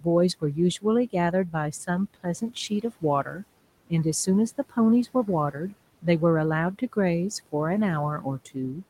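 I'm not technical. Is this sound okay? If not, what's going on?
No. The speech is being cut by the noise suppressor, which is the part of the system meant to remove background hiss. It has mistaken bits of the speech for noise and turned them down. This happens between 0.81 and 1.54 s, 1.87 and 3.4 s, 5.14 and 6.05 s, and 8.21 and 8.78 s. Each time, brief pieces adding up to a tenth to a fifth of a second sound swallowed or faint, such as soft consonants or word endings.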